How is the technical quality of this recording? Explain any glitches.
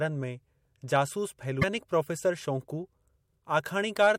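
One glitch affects the recording. Damaged data in a compressed stream, from 1.58 to 1.64 s just after "में जासूस": corrupted bytes make the decoder misread frames and lose sync until it finds the next valid frame header, producing a brief chirp, squawk, click or short hole.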